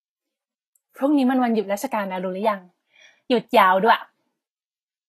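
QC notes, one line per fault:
Throughout, Vorbis compression: the speech was most likely encoded with Vorbis at a low quality setting, and the sound fits a bitrate around 25 kbps. The encoder cut everything above 14.2 kHz and quantised the remaining treble so coarsely that fine detail was replaced by noise of similar energy. The damage is plainly audible: the upper range turns hissy and grainy, tonal parts sound roughened, and consonant attacks are smeared.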